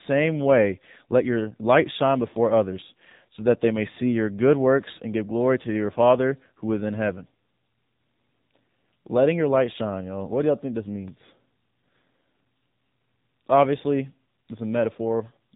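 A speech recording passed through the AMR narrowband mobile codec from start to finish, and the damage is plainly audible. Nothing above 4 kHz survives, and the voice takes on a buzzy, synthetic quality, which fits AMR-NB at around 7.4 kbps. A plain telephone-band filter would only dull the top end. Here the voice is rebuilt from a vocal tract model driven by a pitch predictor and a few pulses every 5 ms, which is what produces that artificial, modelled sound.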